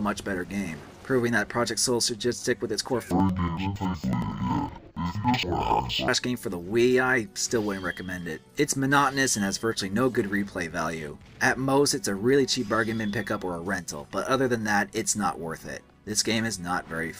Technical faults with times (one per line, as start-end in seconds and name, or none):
3.11-6.13 interleaved audio read as planar